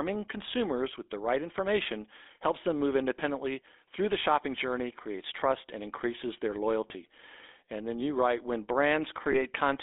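Throughout, the speech carries the gravelly buzz of the GSM full-rate codec, which points to a 13 kbps GSM full-rate coder. It rebuilds the voice from a vocal-tract model driven by sparse pulses. The line passes only about 250 Hz to 3.6 kHz, and the roughness is plainly audible.

At 6.88 to 6.92 s, and again at 9.32 to 9.35 s, there are brief lost GSM frames. Each gap of about 20 ms fits one missing frame. The decoder repeats the previous frame's settings, which gives a short, rough, metallic ring.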